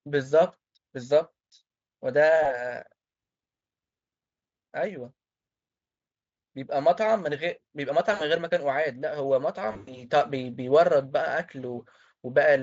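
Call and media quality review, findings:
VoIP packet loss concealed by the speech codec: buzzy, fading smears at 2.43–2.62 s, 8.13–8.26 s, 9.71–10.04 s. The decoder extrapolates the last pitch and filter over missing packets (one 20 ms frame up to scattered 140 ms losses). It is unlike a hard dropout because there is no silence, just a decaying tone and a weak recovery tail. The Speex path itself sounds clean.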